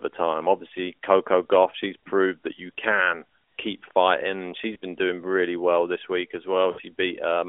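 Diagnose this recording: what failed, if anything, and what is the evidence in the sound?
Lost AMR speech frames on the radio link: a brief warble at 4.74–4.76 s, just before "been doing really well", then a drawn-out, fading smear at 6.72–6.81 s after "well this week as". The decoder stretched the last pitch with falling gain, so there is no click or abrupt silence as in a hard dropout.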